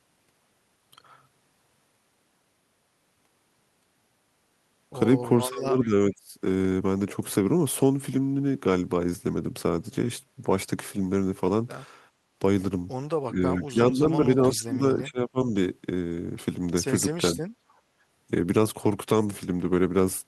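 From 5.39 to 6.34 s the speech dips by up to about 20 dB for roughly 0.7 s in total, likely speech suppressed in double talk: the echo canceller turned the talker down with the far end. The waveform envelope shrinks in pieces, and the spectrogram thins, especially at the top.

Inside that stretch, at 5.82 to 5.87 s, a faint scrap of voice delayed by 404 ms comes back about 25 dB below the speech. This is likely an echo leak from a loudspeaker the canceller did not fully cancel. On a spectrogram it shows as a weak, shifted copy of earlier harmonics.

From 13.29 to 15.39 s the speech is likely suppressed in double talk again, dropping by up to about 15 dB across roughly 1.5 s. It comes and goes as uneven notches in the waveform and dimmed bands in the spectrogram.

From 17.54 to 18.01 s the background is gated by the echo canceller. The room sound falls by about 12 dB for roughly half a second while the loudspeaker plays, then returns. 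The noise floor shows a clear step down and back up.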